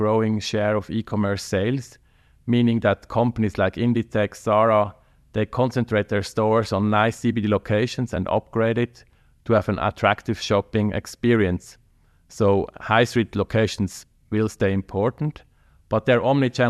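Speech, with no audible faults.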